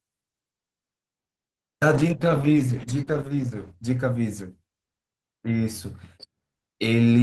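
Speech with a call bitrate drop from 1.94 to 5.53 s. The encoder was starved of bits, so the sound turns coarse and watery, with the high frequencies cut off, sounding like a fall from about 32 to 10 kbps, held at its lowest for 1.52 s. Unlike packet loss, it has no gaps, only smeared, muffled audio until it recovers.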